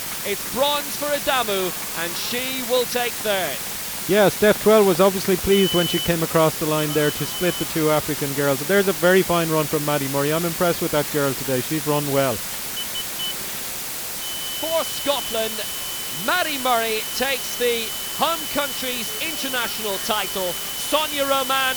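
Throughout the clip, the audio carries low bit depth with dither: only about four bits, with dither added before rounding, so the rounding error turns into a constant, even hiss nearly as loud as the sound itself. Unlike undithered quantisation, it stays steady and brings no grainy distortion.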